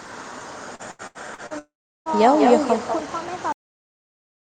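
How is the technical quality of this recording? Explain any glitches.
The recording has four clear problems: a persistent echo, a choppy robotic stretch, a longer gap in the audio, and an abrupt ending.

Echo with no canceller runs through the whole clip. The far end is playing the call through a loudspeaker, its microphone picks that sound up, and no echo canceller removes it before it is sent back. Every phrase is therefore shadowed by a second copy arriving around a fifth of a second later and only about 7 dB quieter. That copy sounds thinner than the original.

Repeated packet loss (robotic sound) affects 0.75 to 1.53 s. Packets kept going missing or arriving too late, and the receiver patched each hole by stretching the last bit of sound it had. Five such holes fall inside that span, the longest about 79 ms, and together they cover about a third of the stretch. The speech there comes out choppy, with small pieces missing.

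A long network dropout occurs between 1.59 and 2.16 s. For roughly half a second the sound turns into a synthetic continuation of the last sound, which decays into a fading tail and then into about 0.37 s of near silence before the speech resumes. The part that was lost never returns. The likely cause is that no audio reached the receiver for that whole stretch, so its concealment could only fill in and then fade out.

A cut-off end occurs at 3.52 s. The final buffers were never written or played, so the audio stops in the middle of a sound. It falls straight to digital silence with no natural decay.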